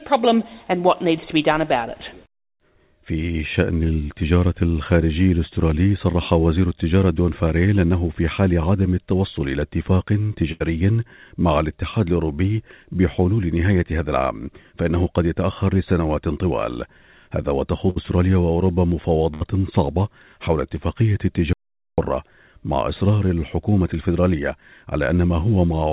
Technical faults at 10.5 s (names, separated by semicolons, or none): burst of packet loss